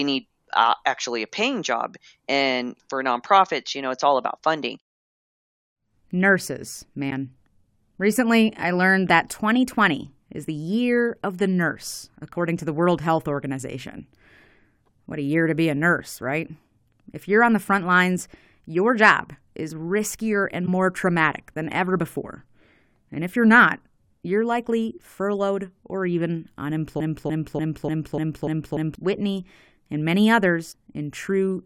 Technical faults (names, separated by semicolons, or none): broken MP3 bit reservoir; broken-record loop